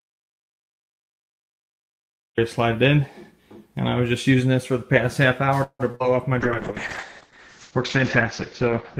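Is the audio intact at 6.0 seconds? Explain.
No. Around 6.0 s, two short concealed packet losses overlap: about 20 ms of audio missing within 5.91 to 6.03 s, and 40 ms within 5.95 to 6.02 s. The receiver bridged each gap by extending the preceding sound, from its pitch or as shaped noise, then blended back, which leaves a brief smear or wobble.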